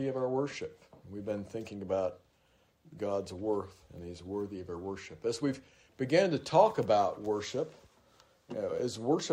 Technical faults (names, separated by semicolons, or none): none